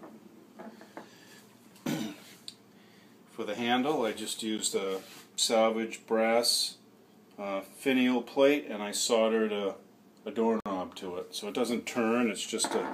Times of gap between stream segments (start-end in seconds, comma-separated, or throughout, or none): 4.58, 10.60-10.66